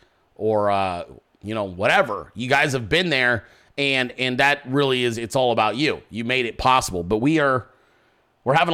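No technical faults can be heard anywhere in this speech recording. Nothing in the signal chain gives any sign of having gone wrong at any point.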